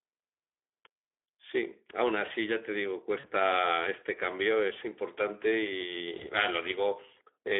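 Throughout the recording the speech passes through a Speex codec at a low-to-middle quality setting, with damage that fits a mode around 11 kbps. With so few bits left for the excitation signal, the CELP coder cannot rebuild the voice cleanly, so the speech sounds noisy and hoarse. The line carries only 300 Hz to 3.5 kHz, which gives the thin, boxy telephone band with no high-frequency air.

From 3.19 to 3.31 s, VoIP packet loss concealed by the speech codec takes over. About 40 ms of audio went missing, which points to two consecutive 20 ms frames. The decoder stretched its last pitch and filter across the gap while lowering the gain, so the sound smears and fades. Because each frame builds on the previous one, the voice stays weak or distorted until about 3.31 s.

The same packet loss concealment recurs from 6.17 to 6.31 s, this time covering roughly 20 ms, which fits a single lost frame. 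It produces a shorter smear and a brief weak or distorted tail before the speech recovers.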